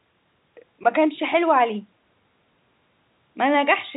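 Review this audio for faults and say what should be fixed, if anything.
Nothing in this audio needs to be fixed, as the review turns up no faults.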